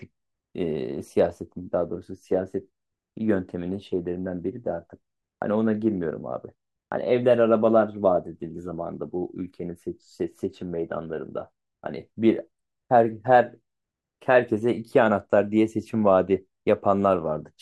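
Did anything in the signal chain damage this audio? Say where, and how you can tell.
No, nothing in the signal chain stood out as damaging this speech on listening.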